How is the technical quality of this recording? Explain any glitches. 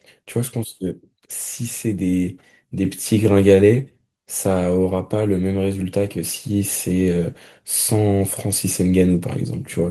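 The recording has one glitch: a microphone volume step-up at 2.85 s. The call software judged the input too quiet and raised the device's microphone gain by about 5 dB in a single jump, so the speech and the background noise get louder together. On a waveform the envelope widens abruptly there, and a spectrogram shows every band, including the noise floor, brightening at once in a sharp vertical edge.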